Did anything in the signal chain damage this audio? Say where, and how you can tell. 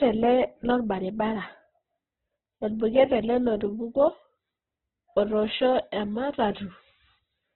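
Yes, at the codec stage. The speech is grainy and rough throughout, with nothing above about 4.1 kHz. That's likely Opus compression in its music mode at a very low bitrate, around 8 kbps. Starved bands get filled with folded or noisy content, and the bandwidth collapses to narrowband.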